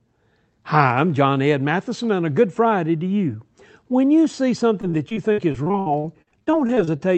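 From 4.81 s to 7.01 s, just after "you see", the speech breaks up with repeated packet loss, giving a robotic sound. Lost or late packets leave around twenty holes, the longest about 61 ms, and each is patched by stretching the preceding sound, so roughly a quarter of the stretch is concealed. On a spectrogram, smeared, flat-toned blocks interrupt the harmonics, which stop near the call path's 8 kHz ceiling, while the waveform shows choppy, repetitive segments.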